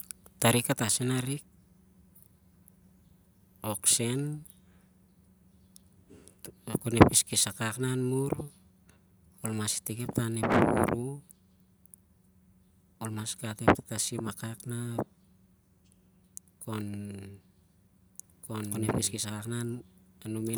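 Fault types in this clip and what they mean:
doubled audio track: From 18.19 s onward, an equally loud copy of the speech trails about two seconds behind, likely a slower capture path.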